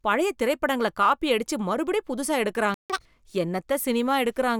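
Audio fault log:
2.74–2.90 s, playback stall: right after "அடிச்சு மறுபடியம் புதுசா" the sound drops out for about 156 ms, likely the player running dry or its thread getting blocked.
2.90–3.05 s, catch-up at higher speed: the backlog plays at double speed, so pitch jumps around ten semitones while it wins back the lost time.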